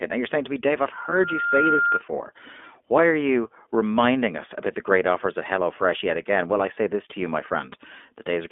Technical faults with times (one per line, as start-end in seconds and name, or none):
0.00-8.51 iLBC codec
0.97-2.02 loudspeaker feedback squeal
1.10-1.13 lost iLBC frames